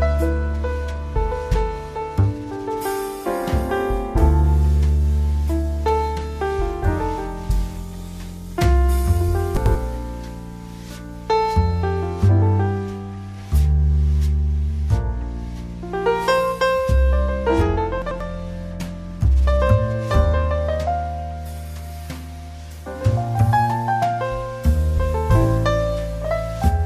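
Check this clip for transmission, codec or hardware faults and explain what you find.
Chunks out of order occur twice, from 9.57 to 9.75 s and from 18.02 to 18.20 s. Each time, a block of about 93 ms plays one slot late, after the block that should follow it. There are three hard joins and the sound briefly jumbles. Unlike a dropout or a repeated buffer, nothing is missing and nothing is duplicated. The same material just plays in swapped order.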